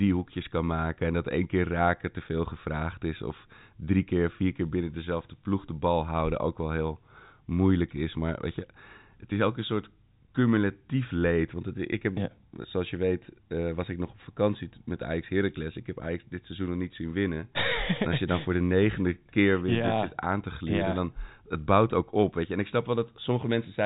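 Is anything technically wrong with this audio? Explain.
No, nothing is wrong: the speech is carried as G.711 telephone coding, so its band ends near 3.8 kHz, which is normal for that format rather than a defect.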